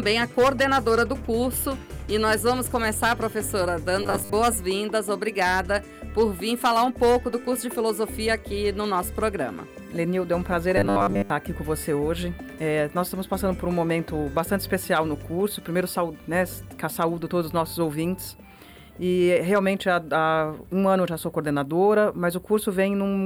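Twice the sound collapses into a rigid, metallic buzz pinned at 100 Hz, from 4.03 to 4.33 s and again from 10.77 to 11.30 s, loosely tracing the underlying audio while losing its natural detail. This is robotic sound from repeated short buffers, likely caused by audio arriving too seldom, so playback loops the last fragment, about 10 ms long to match the 100 Hz tone, in place of most of the real signal.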